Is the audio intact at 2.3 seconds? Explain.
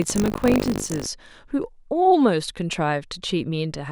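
Yes, at 2.3 seconds the speech plays through cleanly with no audible fault.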